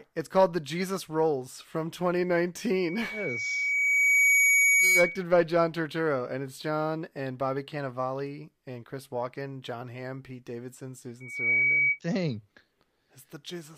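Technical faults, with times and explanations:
2.72–5.24 s and 11.20–12.0 s, loudspeaker feedback squeal: a piercing tone near 2.3 kHz swells out of the speech and rings on top of it. The first time it takes about a second and a half to build and rises to roughly 10 dB above the speech. The second builds in a fraction of a second and stays lower, about 5 dB over. The microphone is picking up its own loudspeaker, and at that one frequency the loop gain tops unity, so the tone feeds itself until the loop is broken.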